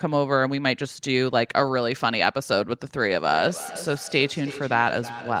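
From 3.18 s to the end, there's feedback echo between two devices: a second device in the room replays the speech, its mic catches it again, and neither echo canceller removes it. The speech comes back about every third of a second, peaking about 14 dB below the original.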